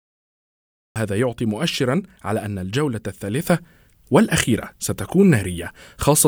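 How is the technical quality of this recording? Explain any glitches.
The recording has two clear technical faults: an abrupt start and a sudden jump in level partway through.

The cut-off start comes first. The clip opens with dead digital silence that runs until 0.96 s, and then the speech appears already in progress, at full level, with no natural onset or fade-in and a hard edge where it begins. This happens when capture or streaming begins late: the earliest samples were never recorded, so the audio resumes mid-sound against an empty buffer rather than building up naturally.

The sudden gain jump follows at 3.47 s. From that instant to the end of the clip, everything is about 6 dB louder: the speech and the background noise rise together in a single step, with no ramp between the old and new levels. Because the noise floor rises along with the speech, the change isn't in the talker but in the signal path. 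The likely cause is a digital gain setting being changed from one sample to the next, without the smoothing that would normally ease the transition.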